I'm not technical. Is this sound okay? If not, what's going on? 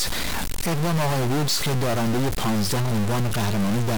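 No. From start to finish, the speech has a harsh, buzzy, gritty edge, and the gaps between phrases aren't quiet but filled with a rough hiss that stays clearly audible. This points to a stuck bit: one of the binary digits that make up each sample is frozen instead of following the sound, likely from a faulty connection or converter. Because that digit is a fairly significant one, the errors are large enough to roughen everything and keep the pauses noisy.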